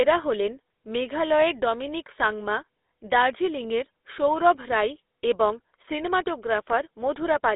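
Throughout the speech, the GSM full-rate codec leaves a buzzy, gravelly roughness, and its 13 kbps character shows plainly. On top of a telephone band-limit of 300 Hz to 3.7 kHz with nothing above 3.8 kHz, the pulse-driven excitation adds coarse grit to voiced sounds.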